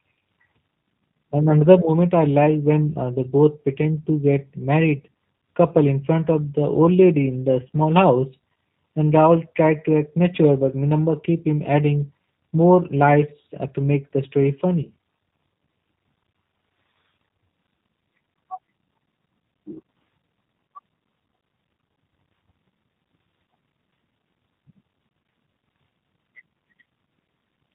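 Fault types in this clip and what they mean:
G.729 codec, throughout: the speech is resynthesised from a vocal tract filter, a pitch predictor and a few pulses per short frame, so it sounds rough and somewhat synthetic, with nothing above 4 kHz. The damage is plainly audible and fits an 8 kbit/s G.729A stream.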